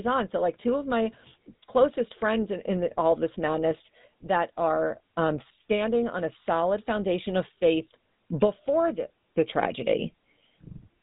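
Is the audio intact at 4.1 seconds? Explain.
No. At 4.1 seconds the speech carries GSM full-rate codec damage, which runs through the entire clip rather than appearing at that moment alone. The coder models the vocal tract as a filter and excites it with a sparse train of regularly spaced pulses, discarding most of the excitation detail, which fits a 13 kbps full-rate stream. The result is a plainly audible buzzy, gravelly roughness, and nothing is passed above 3.8 kHz, so the top end sounds cut away.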